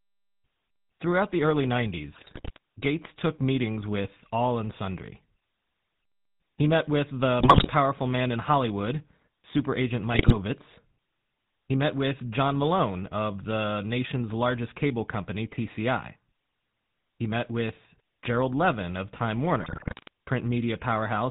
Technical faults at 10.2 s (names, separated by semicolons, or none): GSM full-rate codec; GSM bit errors